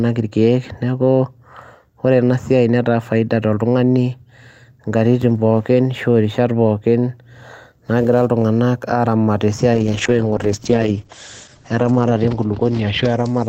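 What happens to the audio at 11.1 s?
At 11.1 s a call bitrate drop is under way, from 9.77 s to the end: coding falls from 64 to 10 kbps and bandwidth narrows from 20 kHz to 8 kHz, so the speech turns muffled and watery-rough rather than simply filtered or gapped.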